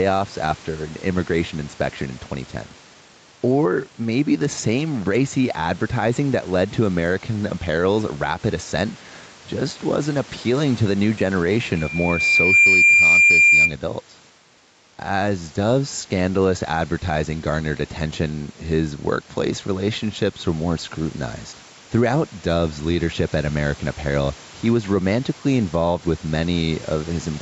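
Throughout the speech there is gain pumping: the gain swings by roughly 5 dB each time a loud syllable arrives, leaving loud and soft passages squashed together. The likely cause is input gain set far too high with a fast limiter or compressor pulling it down on every peak. Unlike room noise that genuinely varies, the breathing here is locked to the speech level.

From 11.76 to 13.75 s a loudspeaker feedback squeal takes over. A single tone at 2.4 kHz grows out of nothing over roughly 0.7 s and settles about 10 dB above the speech. The microphone is hearing the loudspeaker it feeds, and at that one frequency the loop gain has passed unity. The steady build is what separates it from a codec artefact or a burst of noise, and the squeal stands out clearly against the 8 kHz band limit of the call.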